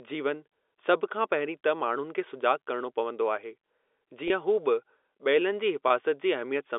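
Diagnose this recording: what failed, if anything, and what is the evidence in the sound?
Two brief buzzy holds, at 4.28–4.30 s and 5.88–5.90 s: network packet loss with pitch repetition, with each 20 ms gap filled by repeating the last pitch period.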